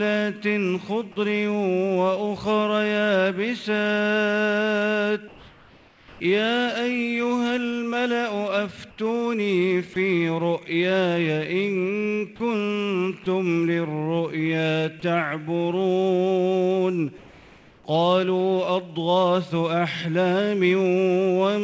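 From 5.28 to 6.20 s, 8.90 to 8.98 s and 17.18 to 17.84 s, the background, sitting about 27 to 28 dB below the loud passages, turns into a flat, featureless hiss about 3 to 4 dB quieter. This is likely comfort noise in place of the background: discontinuous transmission stopped sending and the receiver synthesized a rough spectral stand-in.

At 9.94 to 9.96 s, a sliver of sound, roughly 10 ms, is lost and steady noise briefly takes its place. This fits sound dropped by the voice detector, which likely misjudged that moment as background and paused transmission.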